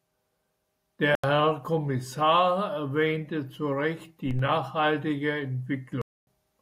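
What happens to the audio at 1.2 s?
The speech drops abruptly into silence from 1.15 s to 1.24 s, a clean hole of about 86 ms, which fits a single lost frame. This is a corrupt frame muted: flipped bits made the decoder reject that compressed frame, and the player filled the gap with silence while keeping timing intact.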